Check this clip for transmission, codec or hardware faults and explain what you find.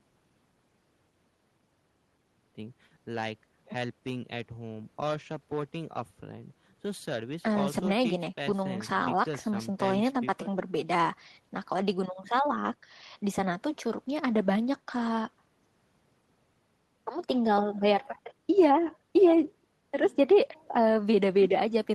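No transmission, codec or hardware faults turn up in this clip.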